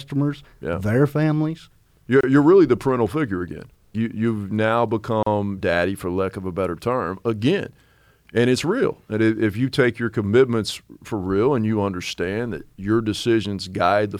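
At 2.21 s, just before "you're really the parental", and at 5.23 s, between "you've now" and "daddy for lack of", the speech stops for 27 ms and 37 ms: a gap at a join of encoded pieces, where separately encoded segments were joined with their encoder delay and end padding left in. Unlike a dropout, nothing is lost; the speech resumes exactly where it stopped, after a brief hole with smeared edges.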